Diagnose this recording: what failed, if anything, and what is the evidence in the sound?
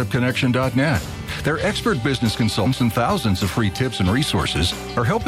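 Codec stage: damaged data in a compressed stream produces a brief glitch at 2.65 s, where corrupted bytes made the decoder misread frames and lose sync until the next valid header.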